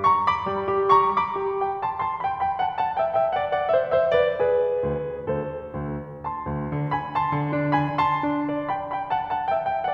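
Listening to this music clip, nothing stood out as a technical problem.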